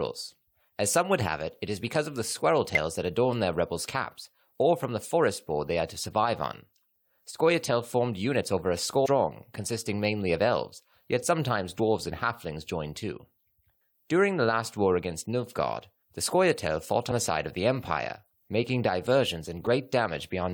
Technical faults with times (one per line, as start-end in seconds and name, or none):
2.75 damaged data in a compressed stream
9.04-9.07 damaged data in a compressed stream
11.78 damaged data in a compressed stream
19.66 damaged data in a compressed stream